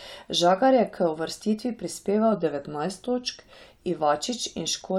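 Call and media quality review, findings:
Drift correction step, 2.32–3.68 s: speech slows 5.9% and drops about 105 cents together, then snaps back. Likely clock-sync resampler refilling its buffer. Unlike wow, the shift is one abrupt step, held steady, not gradual wavering.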